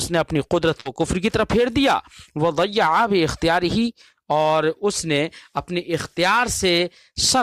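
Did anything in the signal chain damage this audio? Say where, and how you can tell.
Yes. At 0.80 to 0.86 s the sound freezes into a brief held, fading sound for about 50 ms, then jumps ahead with about 50 ms missing. That is a burst of packet loss on the network: the receiver stretched the last audio to cover lost packets.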